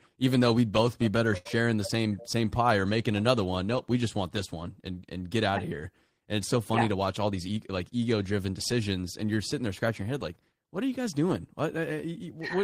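A short stall from a late packet occurs at 1.37 to 1.47 s, right after "we'd both be better" and before "the same same pie". A packet arrived late and the jitter buffer ran dry, so the receiver held the last sound for 78 ms, losing nothing and adding 78 ms of delay. It comes across as a briefly stretched sound with a slight buzz or dip.

A jitter buffer speed-up runs from 6.95 to 7.92 s, between "so funny yeah to" and "ego driven decisions and". With too much audio queued, the receiver trimmed repeated pitch-period slices, around 70 ms in total. The speech plays at 107% speed with unchanged pitch and sounds hurried.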